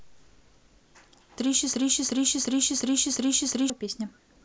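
From 1.74 s to 3.70 s the speech stops moving forward: a fragment about 0.36 s long plays back to back five times over, each pass identical, giving a stuttering, stuck-needle effect before normal playback resumes. This is a broken-record loop. Its likely cause is a stall in the player, encoder or stream that kept re-sending the last piece of audio it held, so whatever should have been heard across those two seconds is missing.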